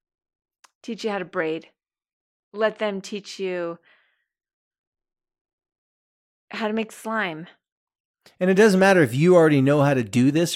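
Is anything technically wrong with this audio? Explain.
No, nothing is technically wrong with this audio.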